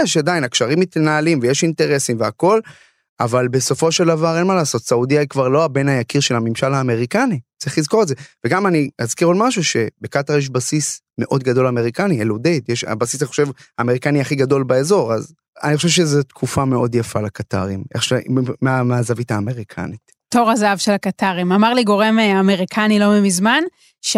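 No technical faults are audible.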